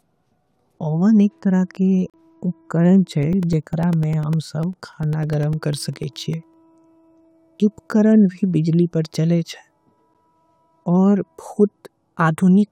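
At 2.10 to 2.14 s a gap between stream segments leaves a hard-edged hole of about 38 ms of silence. Audio is delayed rather than lost. From 3.23 to 6.54 s periodic USB or driver dropouts remove roughly 2 ms of speech every 0.1 s, replacing it with silence. This produces about thirty evenly spaced ticks, and unlike the gaps, audio is actually lost. At 10.14 s a second, shorter 10 ms gap between stream segments recurs, consistent with 2-second segment boundaries.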